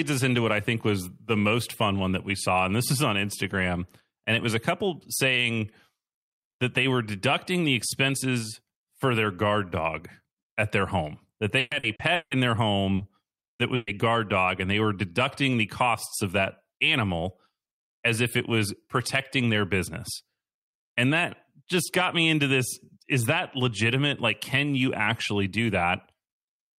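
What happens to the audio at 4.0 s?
Nothing goes wrong at 4.0 s; the speech runs on intact through that moment, with no dropout, click, distortion or other fault to be heard.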